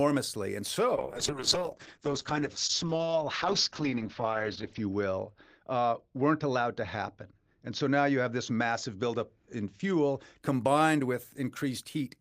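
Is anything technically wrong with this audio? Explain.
Yes, there is a call bitrate drop from 0.96 s to 10.47 s. The encoder was starved of bits, and at its lowest, for about 3.8 s, the speech sounds rough and watery, with its bandwidth falling from 20 kHz to a 6 kHz cutoff, consistent with roughly 32 kbps falling to 8 kbps.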